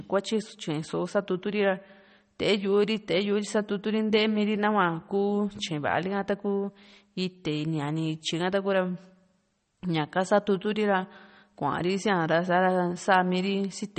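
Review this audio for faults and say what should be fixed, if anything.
Throughout the speech nothing sounds above 8.4 kHz, and sibilants swirl with metallic chirps. This is likely MP3 compression, starved at a rate that fits about 32 kbps, so weak frequency lines flicker between frames. A plain low-pass filter would dull the top without that swirl. Encode at a higher bitrate or keep a lossless master.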